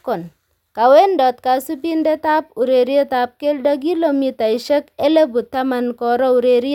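No technical faults are audible anywhere in the speech recording.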